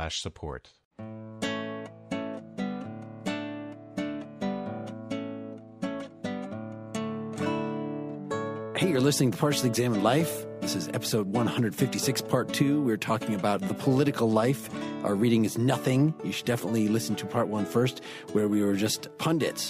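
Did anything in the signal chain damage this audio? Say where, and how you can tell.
No, nothing in the chain audibly damaged this audio.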